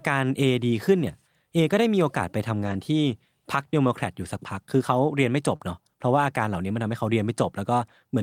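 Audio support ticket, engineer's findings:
Rough, grainy patch at 2.63–2.73 s, no dropout. Lost packet rebuilt from error correction: three separate packets lost, about 60 ms replayed from low-bitrate redundant copies carried in the following packets. Opus in-band FEC in the decoder.

Same rough texture, shorter, at 3.83–3.85 s. Single lost packet rebuilt from error correction, about 20 ms. Redundant copy coarser than the primary stream, hence the noisier frame.

Brief smear at 5.55–5.61 s. Short concealed packet loss: about 40 ms arrived too late for the decoder, with no redundant copy available. Receiver-side concealment extrapolated the preceding sound across the hole, then crossfaded back into the real signal.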